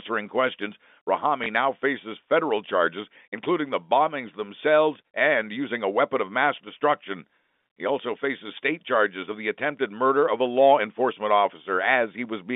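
A speech recording on a telephone-band line carries one fault: packet loss with the last packet repeated. At 1.44 s, one 20 ms packet is missing. The receiver replays the previous packet in its place, which fits a 20 ms packet size. The repeat gives a small blip.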